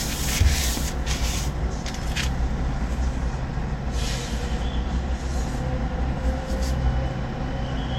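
Transcoding between lossy codecs runs throughout this everyday-sound recording. Nothing sounds above 16.6 kHz, with smeared, layered compression artefacts, likely from an MP3 encode re-encoded at a low Vorbis bitrate.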